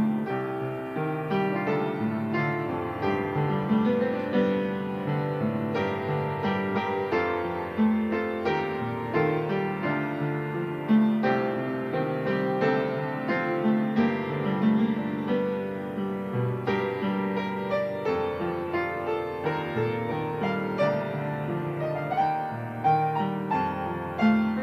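Nothing in this audio stands out as a technical fault, so there's nothing here to walk through in time order.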